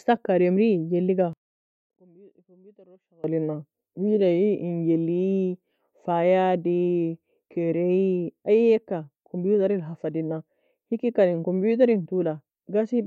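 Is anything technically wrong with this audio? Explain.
Yes. One channel inverted, 1.33 to 3.24 s: the speech falls by about 30 dB to a faint trace, then returns. The likely cause is reversed polarity on one stereo channel, so content common to both channels cancels when they are summed to mono.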